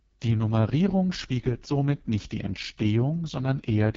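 AMR wideband (HD Voice) codec damage runs through the whole clip, from start to finish. The codec models speech with a pulse-driven vocal tract filter and fills the top band with shaped noise instead of real detail. Here the damage is heavy: the speech sounds rough and raspy, with a gritty, buzzy edge, which fits the 6.6 kbit/s rate, the lowest the codec offers. Nothing is heard above about 7.6 kHz.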